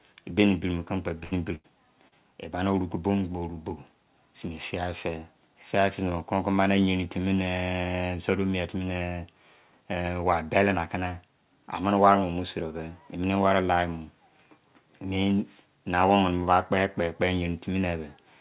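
Speech, carried over a call path whose band stops near 4 kHz, which fits the G.711 A-law codec. Two bursts of packet loss hit at 1.24 to 1.34 s and 1.55 to 1.67 s. In each, about 80 ms of audio never arrived in time. The receiver extended the last sound for roughly 75 to 85 ms, fading it into a held buzz or hiss. The speech then resumes with that stretch gone. A short concealed packet loss follows at 2.08 to 2.15 s. About 40 ms went missing. The gap was patched with roughly 37 ms of continued sound, heard as a brief smear before the real audio returns.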